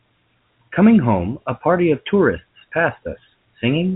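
Nothing goes wrong anywhere in this speech; what you hear is ordinary telephone-band sound from G.711 coding, with nothing above 4 kHz and at most a faint quantisation hiss riding along with the level.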